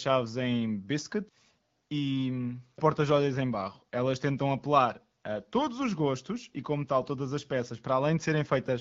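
No technical faults can be heard in the speech, which carries the band-limited sound of an AMR wideband (HD Voice) connection at a rate consistent with 12.65 kbit/s, leaving only light coding colour.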